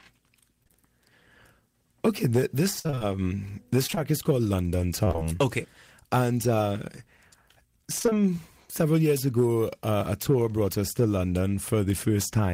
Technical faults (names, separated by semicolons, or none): short concealed packet loss; repeated packet loss (robotic sound)